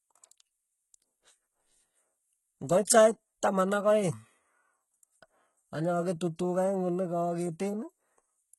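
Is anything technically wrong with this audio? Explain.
Yes. Throughout the speech, the problem is likely low-bitrate audio saved at a high bitrate: a very low-rate encoding, consistent with HE-AAC around 16 kbit/s, re-encoded as high-rate MP3. The MP3 cannot restore what was discarded, so content stops at 11.8 kHz and the original coding smear remains.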